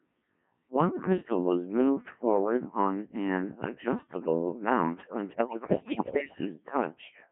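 Throughout, the speech passes through a Codec 2 vocoder. It sounds like the roughly 1.3 kbit/s mode, rebuilt from pitch and envelope alone within 150 Hz to 3.4 kHz, so it is heavily robotic and buzzy. From 5.32 to 6.38 s, just after "on an adjustable mount", bit errors on digital voice radio corrupt the vocoder frames. The pitch, level and timbre jump, breaking into warbling gibberish.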